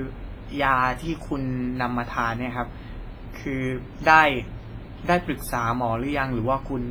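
From start to finish the speech carries heavy codec damage, and it sounds like WMA compression is the likely culprit. There's a ringing, washy smear around each syllable where quantisation noise has spread across long transform blocks, plus a hiss that swells and fades with the level. Quieter spectral detail has dropped out entirely, which fits a low bitrate somewhere around 24 kbps, leaving the sound washy.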